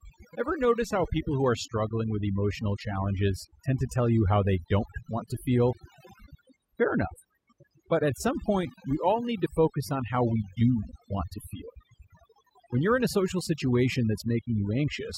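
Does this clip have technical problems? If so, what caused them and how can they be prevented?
Yes: overdone noise removal throughout, with bands near the noise estimate gated out, leaving twinkly near-silence between phrases. Next time, back the reduction amount off and check by ear.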